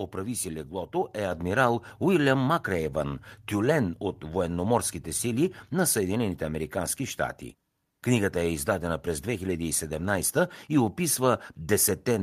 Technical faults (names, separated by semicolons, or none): microphone volume stepped up